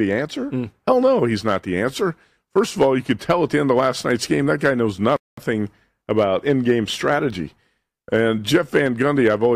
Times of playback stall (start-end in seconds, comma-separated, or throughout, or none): 5.16-5.37